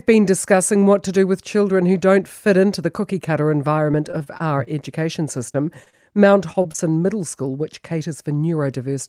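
Right after "into the cookie cutter", from 3.91 to 4.68 s, repeated packet loss (robotic sound) sets in. Six short holes, the longest 27 ms, are patched by extending the preceding sound, so about 14% of that stretch is synthetic and it turns choppy and robotic. A spectrogram shows repeated smeared, flattened slices, and the waveform shows clipped-off, looped segments.

Short concealed packet loss follows at 5.52–5.56 s, 5.84–5.88 s and 5.90–5.95 s. Each drops about 20 ms, which the decoder bridges with a continuation of the last sound before blending back into the real audio. Each drop is heard as a quick smear or wobble and appears as a brief blurred column on a spectrogram.

Repeated packet loss returns from 6.53 to 6.80 s, with four gaps of up to 23 ms. Concealment fills roughly 28% of that span, so it is more densely patched than the first burst and shows denser smeared patches.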